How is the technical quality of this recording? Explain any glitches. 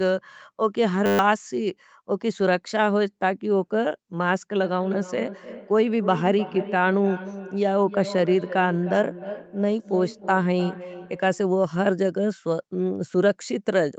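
Two faults stand out: a brief buzz early on and a long stretch of repeating echo.

At 1.06 to 1.19 s, a steady 100 Hz buzz replaces the audio. This is a system hang loop: the hardware replayed one 10 ms buffer 13 times, losing roughly 150 ms.

From 4.62 to 11.53 s, the speech returns about 300 ms later, thin and ringing, at about 13 dB below the voice. This is feedback echo between two devices, as one device replays another's microphone.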